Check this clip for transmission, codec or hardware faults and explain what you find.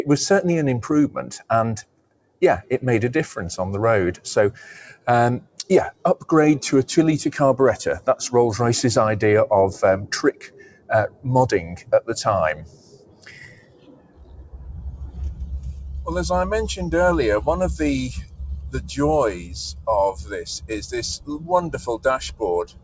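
The main problem is a speech-oriented noise suppressor that was left running on non-speech sound. It's audible throughout, with eight stretches where it clamps down hard. The top end stops at 8 kHz, which fits a G.722 call path.

Noise suppressor applied to music or sounds: this runs the whole clip. The suppressor reads sustained tones, ambience and tails as noise and keeps pulling them down while onsets slip through. Gain swings of around 20 dB make the sound pump and thin out.

Sound cut by the noise suppressor: the drops land at 1.82–2.7 s, 4.86–5.07 s, 5.4–6.28 s, 10.33–11.26 s, 11.7–12.09 s, 12.54–15.42 s, 18.22–18.95 s, and from 19.33 s to the end. Each one cuts about 15 to 18 dB. Held or decaying material sinks or has its tail chopped short, while sharp attacks stay mostly intact.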